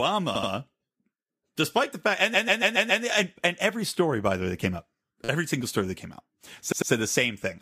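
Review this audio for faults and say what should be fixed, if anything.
Repeated frames stutter the speech four times. At 0.34 to 0.50 s, a 68 ms block plays twice more. At 2.33 to 3.03 s, after "despite the fact", a 139 ms block plays five extra times. At 5.24 to 5.28 s, after "way that came up", a 9 ms block repeats five times. At 6.71 to 6.91 s, after "story that came out", an 89 ms block plays twice more. Each stutter adds its repeats to the running time. The same compressed frames were written or sent again, so the decoder replayed them. To fix it, the writing or transmission path should drop any frame it has already delivered.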